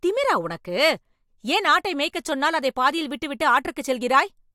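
No technical faults are audible.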